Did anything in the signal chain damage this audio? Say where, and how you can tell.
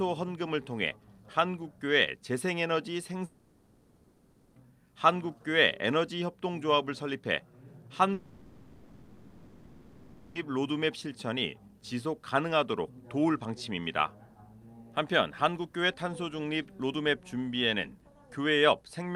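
Yes. From 3.25 to 4.57 s and again from 8.13 to 10.37 s, the audio turns into a fading buzz or hiss carried on from the last sound, then picks up further along with those stretches lost. That's likely a long network dropout, with the receiver filling each gap.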